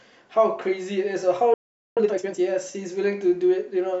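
At 1.54 s the speech cuts out mid-flow and stays silent until 1.97 s, a gap of 428 ms. This is a playback stall. The likely cause is the player running out of data, or its thread being blocked.

From 1.97 to 2.39 s comes time-compressed catch-up. The player clears its backlog by cutting out short pieces and cross-fading the remainder. The speech runs at twice normal speed. Pitch stays unchanged.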